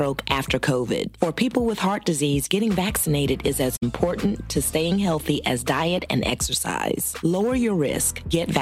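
At 3.76 s to 3.83 s there is AAC frame loss with muting: the decoder zeroed the spectrum for a stretch of about 64 ms, which fits three lost frames. The overlapping windows fade the sound out and back in, leaving a soft-edged gap.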